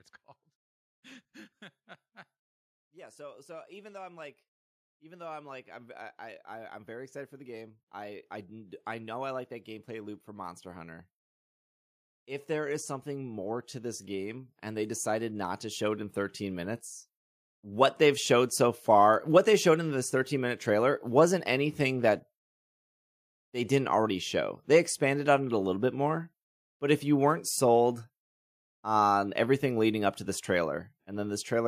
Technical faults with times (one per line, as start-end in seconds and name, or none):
2.78-11.09 automatic gain rising
12.46-16.85 automatic gain rising